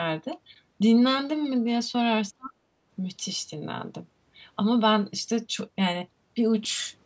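From 2.33 to 2.55 s the speech sinks by around 35 dB. This is likely speech suppressed in double talk. The echo canceller ducked overlapping talk.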